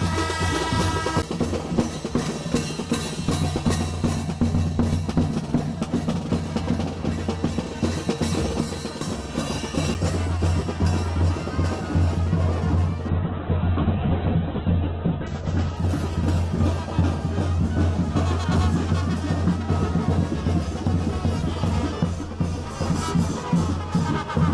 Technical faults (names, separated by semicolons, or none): CD skip; call bitrate drop